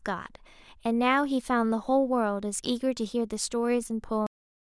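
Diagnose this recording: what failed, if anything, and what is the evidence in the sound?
The final buffers of this speech recording were never written out, a cut-off end at the storage or buffering stage. At 4.27 s the sound stops mid-utterance and drops straight to digital silence with no decay, remaining silent through the last third of a second.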